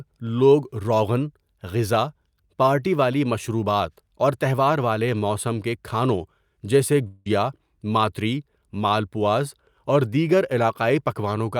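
At 7.07 s, right after "کے کھانوں جیسے", the speech smears into a fading buzz until 7.30 s. About 180 ms of audio is replaced by this fill. This is likely a long network dropout. The speech then resumes with about 10 ms skipped.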